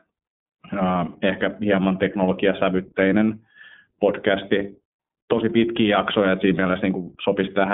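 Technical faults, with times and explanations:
Throughout, iLBC codec: speech is cut off above 3.8 kHz and sounds narrow. Independently coded frames, consistent with 30 ms, make it plainly rough and synthetic.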